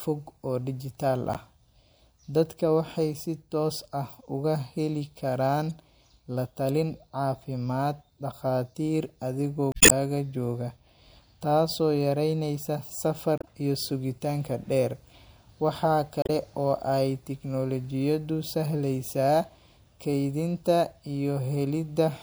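Short glitches break into the speech five times: at 1.33 to 1.37 s, 5.68 to 5.71 s, 9.71 to 9.92 s (the longest, about 0.2 s), 13.38 to 13.44 s just after "taasoo yareynaysa", and 16.22 to 16.31 s. Each is damaged data in the compressed stream. Corrupted bytes make the decoder misread those frames and lose sync until it finds a valid frame header again.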